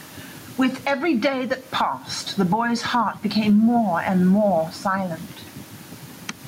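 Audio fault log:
throughout: gain pumping. The room background sits about 36 dB below the speech, and the gain swings by around 10 dB, leaving the speech flattened and squashed. The likely cause is input gain set far too high, with a fast limiter clamping it back on each peak.
1.27 s: hard clipping. A brief, harsh crackle lands on a peak where the signal overshoots the stage's ceiling by about 3 dB. The waveform's tops are sliced flat, and those squared-off edges throw bright harmonics high into the spectrum, heard as a tick of crackle.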